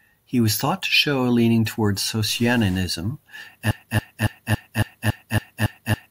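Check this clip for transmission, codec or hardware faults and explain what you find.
Two faults are audible in this speech recording.

From 2.29 to 2.79 s there is a stuck bit. The sound becomes distorted for about half a second, with a gritty edge that tracks the waveform, and the quieter moments within that span fill with noise instead of falling silent. The likely cause is one data bit held at a fixed value by a broken line or converter, so roughly half the samples are offset by that bit's weight.

From 3.71 s to the end of the clip there is a broken-record loop. A fragment of about 0.28 s repeats back to back, identically, nine times, producing a mechanical stutter with no new material after 3.71 s. The likely cause is a stalled player, encoder or stream that kept re-sending the last buffered piece. Whatever audio should have followed in that time is lost.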